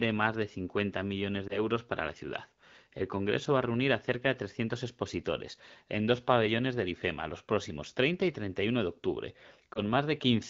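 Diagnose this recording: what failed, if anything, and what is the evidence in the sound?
Lost AMR speech frames occur at 1.48 to 1.60 s, just before "para la ciudad", and at 9.73 to 9.81 s, just after "de octubre". Each is a brief dip or warble, which fits a single lost 20 ms frame. The fault is in the radio link: the frame failed its checksum, so the AMR-WB decoder, running at a clean 12.65 kbit/s, reused the previous pitch and vocal tract settings at reduced gain until good frames resumed.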